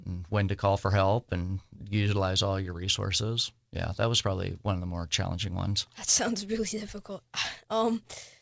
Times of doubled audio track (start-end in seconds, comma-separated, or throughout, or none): none